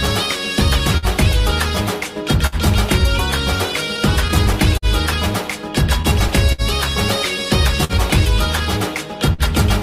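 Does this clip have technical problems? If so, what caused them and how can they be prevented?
Yes. The sender's audio clock runs slower than the receiver's, by roughly 4 percent, which is clock drift between sender and receiver. Because audio arrives a little more slowly than it is played out, the jitter buffer keeps draining, and the receiver has to stretch or repeat short pieces to keep up. Small timing hiccups recur throughout the clip at uneven intervals, giving the audio a faintly unsteady, stuttering flow. Synchronising both ends to a common clock, or using a receiver with adaptive resampling that tracks the sender's rate, prevents this.

Five times a packet arrived late, causing a short stall from a late packet, at 0.97 to 1.06 s, 2.47 to 2.55 s, 6.52 to 6.61 s, 7.84 to 7.92 s and 9.33 to 9.41 s. Each time the jitter buffer ran dry and the receiver held the last sound for 50 to 60 ms until the packet turned up, then resumed where it left off. 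Nothing is lost, but each spot has an audible held or smeared moment with a slight buzz or dip. A deeper or adaptive jitter buffer, together with less congested network routing, prevents these stalls.

Between 3.72 and 4.85 s there are scattered short gaps: about five separate packets went missing or arrived late across that stretch. The receiver patched each hole by extending the preceding sound, filling about 70 ms in total, with the longest patch around 50 ms. The concealment covers the holes, but the passage carries brief ticks and smears where the patches sit. Forward error correction or packet redundancy, on a more stable network path, prevents these gaps.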